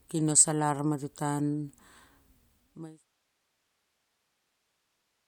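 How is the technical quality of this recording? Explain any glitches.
No glitches heard in the speech; the only level change is a smooth editorial fade-out from around 2 s down to silence at 3.05 s, with no click or hard edge.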